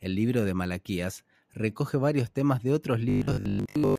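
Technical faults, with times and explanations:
3.10–3.99 s, robotic sound from repeated short buffers: after "varios temas de otros", speech becomes a rigid metallic 50 Hz buzz, likely from a 20 ms chunk replayed repeatedly. The spectrogram shows evenly spaced horizontal harmonic lines, and the waveform a repeating pattern.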